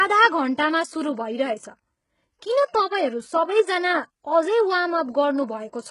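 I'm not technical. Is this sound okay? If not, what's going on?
No. Heavy HE-AAC compression runs throughout, likely the cause: the treble is rebuilt from lower sounds and nothing reaches above 11.1 kHz, so s sounds come out gritty and lispy.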